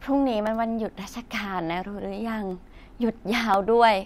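From 0.47 s to 3.54 s the speech is broken by periodic USB or driver dropouts, recurring every 1.02 s. Each time, a background task briefly stalls the audio path and about a millisecond of signal is replaced by silence, leaving a short, sharp tick in the speech. What separates this from random clicks or network packet loss is the metronome-like spacing, and the ticks are heard only where sound is present, not as added noise.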